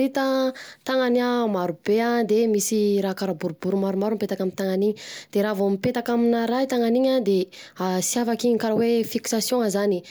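No technical faults can be heard anywhere in the speech; the signal stays continuous and stable throughout.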